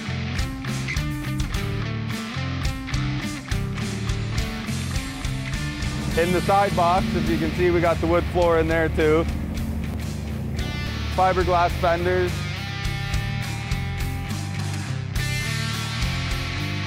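The capture side likely fell behind and let the hardware overwrite samples it had not yet read, a dropped buffer (overrun), three times: at 2.18 s, 9.94 s and 10.87 s. Each missing stretch is spliced straight across with no gap of silence, so the audio jumps forward. The losses at 2.18 and 10.87 s are short, around 50 ms, while the one at 9.94 s is closer to 150 ms and produces a bigger skip.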